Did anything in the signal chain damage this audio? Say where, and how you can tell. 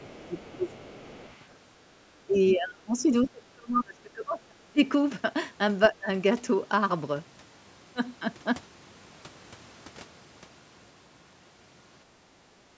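Yes. The damage happens in the call processing, at the echo canceller. From 0.0 to 1.57 s a faint second voice sits under the talker, roughly 25 dB down. This is the other side's voice leaking through: the far-end signal played from the talker's loudspeaker was picked up by the microphone, and the canceller likely failed to subtract all of it before sending the signal on.

The same stage also causes speech suppressed in double talk. The talker's level sinks by around 20 dB from 0.12 to 0.67 s, by about 30 dB across most of the stretch from 2.26 to 4.8 s, and by about 20 dB in a brief dip from 5.92 to 6.08 s. The likely cause is that both sides spoke at once, and the canceller could not separate its own talker from the echo, so it attenuated everything.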